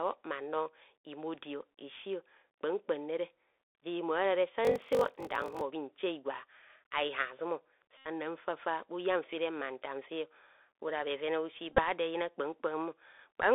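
The clip is speech carried over a Bluetooth CVSD headset codec for its whole length. The band runs only from about 300 Hz to 3.6 kHz. The damage is plain: sibilants turn scratchy, loud high sounds distort, and a granular hiss sits under the speech. The one-bit coder's step size cannot keep up with fast changes.

A Bluetooth headset packet repeated fault occurs three times. From 3.69 to 3.75 s, about 64 ms of audio is lost. The headset replays the last packet, which makes a buzz near 267 Hz. From 7.97 to 8.07 s, just before "fafa bhu yan fere", about 79 ms is lost the same way. From 11.73 to 11.81 s, just before "do eyina", about 41 ms is lost in scattered short repeats, the longest around 15 ms.

From 4.63 to 5.63 s there is a block size mismatch, padded. One stage hands over short blocks, and zeros fill the rest. That puts a gap in every block, heard as a 46.9 Hz buzz, which fits a 1024-sample read block. 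The speech slows to 0.861 times normal speed, with its timbre unchanged.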